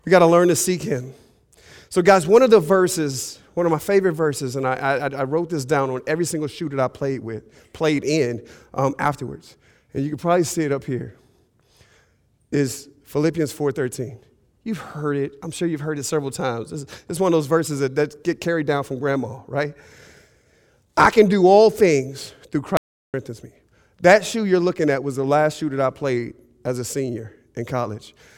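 At 22.77 s, just after "do all things through", the speech suddenly cuts out. This is an audio dropout to silence. The gap lasts until 23.14 s, about 0.37 s. It is dead silence, with no room tone underneath. The input was likely lost for that moment, through a broken link or a brief mute, while recording carried on writing silence. Whatever was said in that stretch is gone. The speech then resumes abruptly mid-flow.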